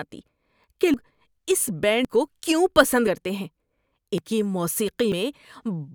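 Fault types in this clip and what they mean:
Dropped buffer (overrun): the speech jumps abruptly at five points, with no gap of silence; the first jump skips roughly a third of a second, while the later ones each lose about a tenth of a second, one just before "کو کیوں پسند" and one just after it. This is likely an overrun, where incoming samples were overwritten before the recording software read them, so the audio on either side is spliced directly together.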